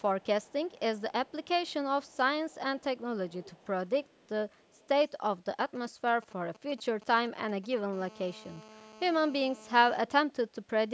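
From 0.0 to 2.17 s and again from 2.49 to 4.88 s, a faint copy of the speech trails the original by 282 ms. It sits far below the direct speech, roughly 35 dB down in the first stretch and a little stronger, around 30 dB down, in the second. This is an echo leak, likely from a far end on speakerphone whose echo canceller let some of its own playback slip back into the line. The fixed delay and the way the copy follows the speech distinguish it from room reverberation, which would smear and decay rather than repeat.

Between 5.61 and 7.74 s come GSM signalling bursts: a galloping dit-dit-dit of short buzzes at about 217 Hz, around 20 dB below the speech. A nearby 2G phone is exchanging short bursts with the network, as it does before a call or message arrives, and the audio circuitry rectifies that radio energy into sound. Because the phone transmits only in short groups, the interference comes out in clusters rather than as a continuous tone.

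From 7.93 to 9.99 s it becomes a GSM phone buzz. This is a steady, raspy 217 Hz buzz with many harmonics, about 22 dB below the speech, which matches a phone now transmitting in regular bursts throughout a call. The clusters from the previous stretch have given way to unbroken interference. The buzz has no connection to the speech itself, and its harsh, harmonic-rich tone sets it apart from mains hum.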